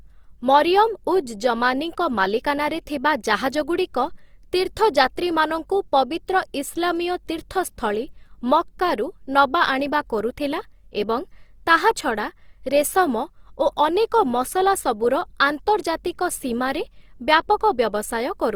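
Opus compression runs throughout: band energy is kept but detail is noise-filled, so the speech sounds rough and grainy, likely from a CELT-mode encode near 24 kbps.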